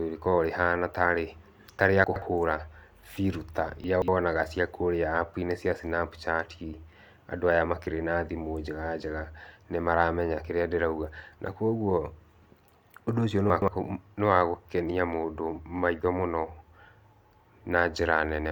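At 2.04, 3.84 and 13.5 s, chunks out of order occur. A roughly 60 ms chunk plays two or three slots late. Each is heard as a brief jumbled moment in the speech.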